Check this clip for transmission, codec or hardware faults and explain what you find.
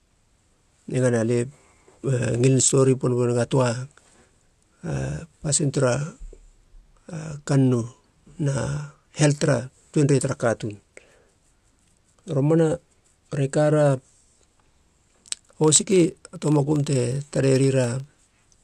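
There's one fault, near the end. From 15.6 to 18.13 s, a filter restarted on every block loses its state and starts each block from silence, adding a small tick each time: a 25 Hz buzz tracking the speech level.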